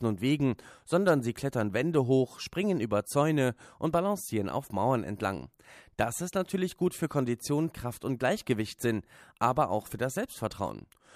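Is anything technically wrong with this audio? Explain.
No, nothing technically wrong can be heard in this speech recording, and the signal stays intact and stable throughout.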